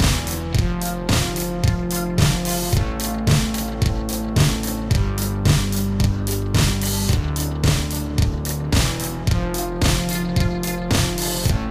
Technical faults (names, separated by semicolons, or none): channel delay (doubling)